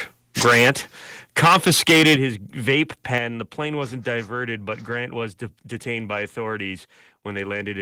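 From 0.41 to 0.71 s and from 1.38 to 2.16 s there is microphone overload. Peaks driven about 10 dB and 8 dB past the converter's limit are flattened into a harsh crackle, likely from excessive input gain. The microphone volume is stepped down at 0.47 s (about 2 dB), 2.16 s (about 8 dB) and 3.18 s (about 6 dB). Each is an abrupt level drop, likely the call software cutting input gain in response to clipping.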